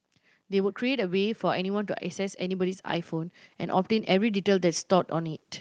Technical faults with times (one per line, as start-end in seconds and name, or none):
0.49-5.44 automatic gain rising